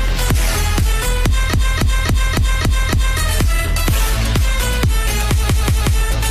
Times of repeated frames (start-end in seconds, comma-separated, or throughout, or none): 1.49-3.16, 5.39-5.95